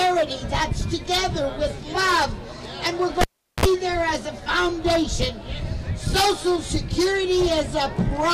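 The audio has one fault: a cable pulled and plugged in again, from 3.21 to 3.65 s. A pop marks the moment the live connection breaks. About 0.39 s of near silence follows while the plug is out. As the plug goes back in, only its tip touches at first. The exposed contact picks up a 60 Hz mains buzz, heard for about 53 ms. A second pop comes as the full connection seats and the sound returns.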